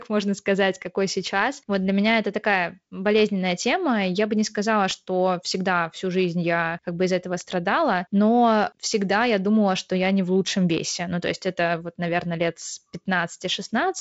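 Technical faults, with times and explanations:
No faults; the speech runs as ordinary G.722 wideband telephone audio, with nothing above about 7.7 kHz and the light upper-band hiss and slightly grainier low band that fit the 48 kbit/s mode.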